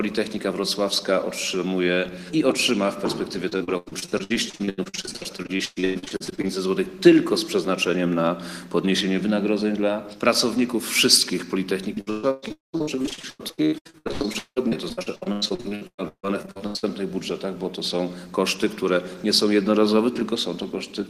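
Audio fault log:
3.49–6.51 s and 11.95–16.85 s, repeated packet loss (robotic sound): packets kept failing to arrive in time, with 40 gaps in the first stretch and 48 in the second, the longest 113 ms and 177 ms. The receiver patched each hole by extending the preceding sound, covering 43% and 47% of those stretches. That stutters into a mechanical, robotic texture, and the original audio in those holes (about 1.3 s and 2.4 s in total) is gone.
12.52–12.75 s, long network dropout: within the second stretch, a continuous block of about 220 ms never arrived, likely from a longer network interruption. The receiver first carried the last sound forward, then gave way to about 150 ms of silence before audio resumed at 12.75 s, with the missing portion not recovered. This gap is heard as a brief hole inside the already broken-up passage.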